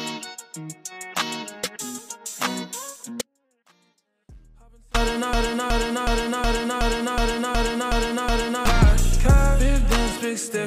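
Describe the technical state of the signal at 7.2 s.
A broken-record loop runs from 5.33 to 8.66 s. A fragment of about 0.37 s repeats exactly nine times, back to back, and the sound that should have played there is lost. This likely comes from a player, encoder or stream stalling and resending its last buffered piece.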